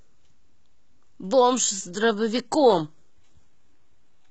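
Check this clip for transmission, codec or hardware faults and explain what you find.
One codec fault: an adaptive stream switching to a lower bitrate. From 1.51 s to the end, the player dropped to a lower-bitrate version, likely because the connection slowed. The speech suddenly drops in quality as codec artefacts rise, with no gap at the switch. That points to a move from roughly 96 kbit/s AAC to a low-rate HE-AAC stream near 16 kbit/s.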